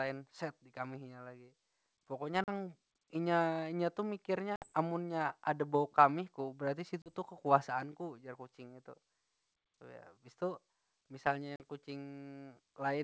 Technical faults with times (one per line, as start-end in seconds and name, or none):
2.44-2.50 packet loss on an ADPCM call
4.56-4.72 packet loss on an ADPCM call
7.02-7.10 packet loss on an ADPCM call
11.56-11.63 packet loss on an ADPCM call